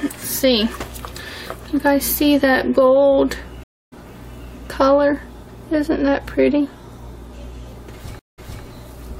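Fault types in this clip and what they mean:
stream reconnect: two short silences, after which the sound jumps ahead roughly 0.3 s, then repeats 0.26 s; a dropped connection restarted the decoder mid-stream.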